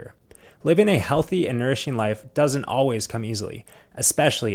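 Nothing here counts as a fault: the speech just runs through Opus voice compression at 24 kbps in its hybrid, fullband mode, and the light coding texture you can catch is simply what that setting normally leaves behind.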